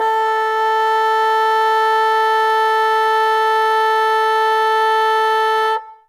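Throughout the music, two distinct sets of smearing and swirly high-band artefacts overlap, likely from transcoding between lossy codecs, Vorbis then Opus. Nothing remains above 20.1 kHz.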